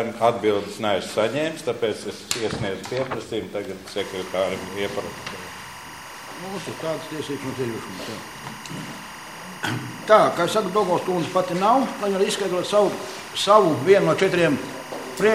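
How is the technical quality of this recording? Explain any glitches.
Linear timecode is leaking into the audio path from 3.98 s to the end, most probably from a neighbouring track or a cable run alongside it. This timecode bleed is a square-wave code that flips between two pitches near 1 and 2 kHz, with a cadence that fits 23.976 fps code. It is heard as a constant chirping, buzzy warble sitting behind the sound, roughly 15 dB below it, throughout the last eleven seconds or so.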